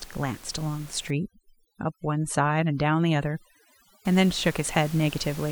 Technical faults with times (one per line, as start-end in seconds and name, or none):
1.10-4.05 overdone noise removal